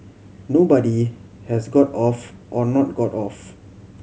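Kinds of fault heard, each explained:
No audible faults turn up anywhere in this speech recording.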